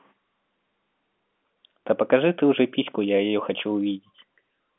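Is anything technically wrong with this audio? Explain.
No, nothing is technically wrong.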